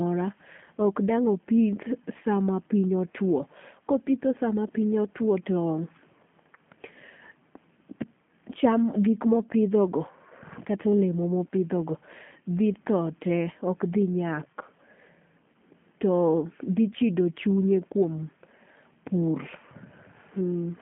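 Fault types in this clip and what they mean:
G.729 codec: a low-rate VoIP coder that rebuilds each 10 ms frame from a vocal tract filter, pitch predictor and sparse pulses. The speech here sits within 150 Hz to 3.4 kHz and sounds plainly rough and synthetic, fitting an 8 kbit/s stream.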